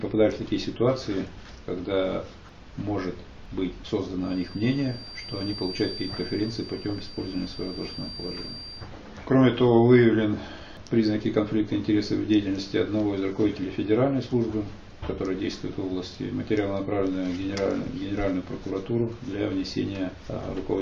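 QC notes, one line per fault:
4.16–8.91 s, feedback whistle: a thin, steady tone at about 4.7 kHz sits behind the sound, roughly 15 dB down, swelling and fading slowly in level rather than building. The sound points to a loudspeaker-to-microphone loop held just at the edge of instability, so a single frequency recirculates with enough gain to persist but not enough to run away; likely an open monitor or PA path near the mic during this stretch.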